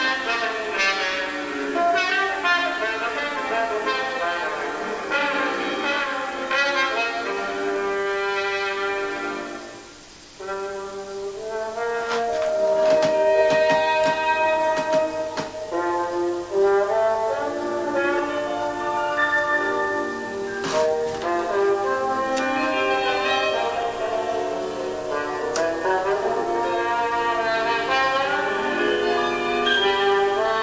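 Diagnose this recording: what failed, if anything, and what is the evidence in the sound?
Nothing failed here: I listened all the way along and there's nothing in the sound that points to a problem at any stage, so there's no diagnosis to make.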